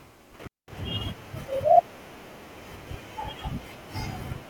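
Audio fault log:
0.41 to 0.72 s, intermittent contact: the speech drops out abruptly near the start, with the line actually open for about 206 ms inside that window. You get a scratchy crackle at each edge as the loose plug or cable makes and breaks, and in the gap there's just faint hiss instead of signal. That's what happens when a connector briefly loses contact and leaves the input floating before it seats again.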